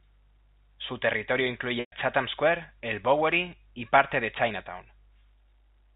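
A speech recording over G.711 telephone coding, limited to 4 kHz, has one packet loss with pitch repetition from 1.80 to 1.92 s. The last pitch period is held briefly, fades out over about 50 ms into silence for the rest of the 120 ms gap (consistent with four 30 ms packets), then cross-fades back.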